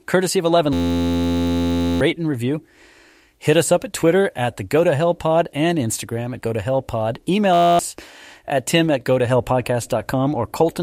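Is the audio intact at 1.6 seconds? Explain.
No, 1.6 s falls inside a system hang loop running from 0.73 to 2.01 s, just before "and review". The system froze while the hardware kept replaying one 11.61 ms chunk, which fits a 512-sample buffer, so you hear a steady 86.1 Hz buzz and lose about a second and a half of audio.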